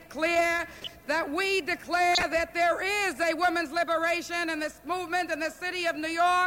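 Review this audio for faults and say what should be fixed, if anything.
Corrupt frame decoded at 0.80 to 0.92 s and 2.13 to 2.23 s: a handful of damaged compressed frames were played anyway, putting energy at the wrong frequencies as short bursts peaking around -25 dBFS and -10 dBFS. To prevent this, check frames for errors and have the decoder conceal or drop any that fail instead of playing them.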